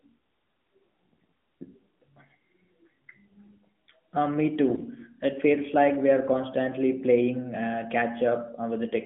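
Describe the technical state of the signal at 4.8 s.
AMR bit errors affect the speech from 4.66 to 4.83 s, so 4.8 s falls near the end of the burst. On a weak link, a few percent of the less-protected bits in each frame arrived flipped, while the check on the critical bits still passed, so the decoder accepted them. Across this span of roughly eight 20 ms frames, the excitation pulses and the fine gain and spectral values are wrong, making the sound scratchy, hoarse and gargly while pitch and level roughly hold. This sits within narrowband AMR band-limiting of about 150 Hz to 3.4 kHz.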